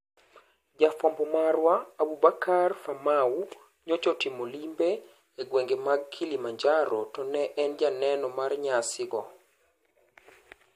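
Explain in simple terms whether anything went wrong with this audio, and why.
A short glitch cuts into the speech at about 9.10 s. That glitch is damaged data in a compressed stream: a small piece of the compressed file was corrupted, so the decoder misread that bit, lost its place, and had to find the next intact chunk before continuing.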